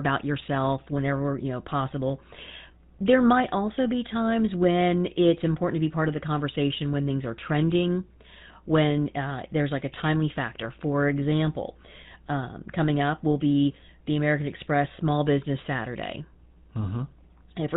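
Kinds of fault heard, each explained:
GSM full-rate codec: the speech has a buzzy, gravelly roughness and nothing above 4 kHz, unlike plain band-limiting, which narrows the sound without adding that rasp.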